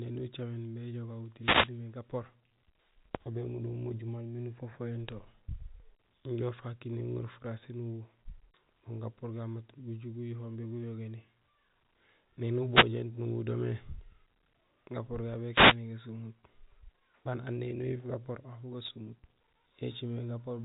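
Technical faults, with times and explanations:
1.39 to 1.71 s, 12.70 to 12.89 s and 15.51 to 15.77 s, wireless microphone noise hit: three short swishes of static rise over the speech, each lasting roughly 0.2 to 0.3 s. The analogue FM radio link from the microphone briefly fades when reflected signals cancel the direct one, so the receiver's own noise rises and takes over until the signal recovers. The bursts stay within the narrow telephone band.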